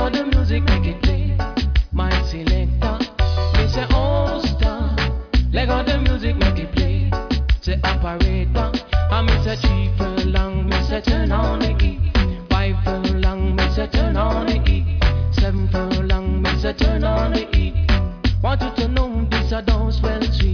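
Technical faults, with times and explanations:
No technical faults detected.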